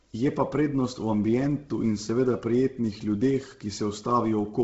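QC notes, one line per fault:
Throughout: Bluetooth LC3 compression, likely. The speech carries a breathy, grainy edge with nothing above 7.7 kHz, as the codec zeroes much of the upper spectrum and fills the gaps with noise. The heavy damage fits a low bitrate of about 16 kbps.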